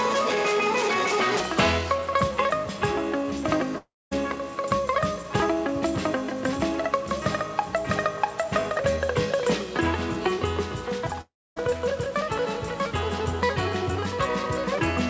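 The audio, carried over a G.722 call path with nothing above 8 kHz, twice stops arriving, likely from a long network dropout: from 3.78 to 4.13 s and from 11.21 to 11.58 s, a brief fading fill gives way to silence before the sound returns with that stretch lost.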